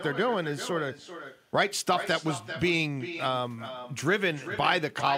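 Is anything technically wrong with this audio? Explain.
Yes. Throughout the speech there is echo with no canceller: the far end's loudspeaker feeds its microphone, returning each phrase around 400 ms later, about 11 dB quieter and thin.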